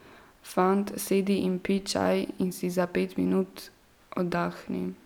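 A short bit of speech with nothing technically wrong to point at: no dropouts, glitches or other faults turn up anywhere in it.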